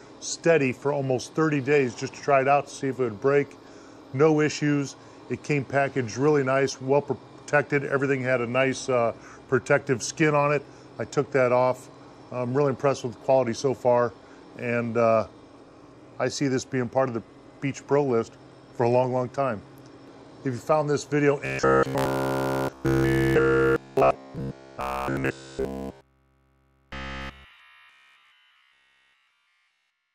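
From 21.46 to 30.14 s, robotic sound from repeated short buffers gives a rigid, metallic 66.8 Hz buzz. The likely cause is a 15 ms stretch looping throughout.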